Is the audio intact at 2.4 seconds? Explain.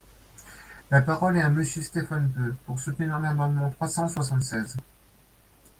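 Yes, at 2.4 seconds the audio is intact, with no dropout, glitch or other fault in the speech, which passes through the Opus voice coding at its usual light level of codec damage.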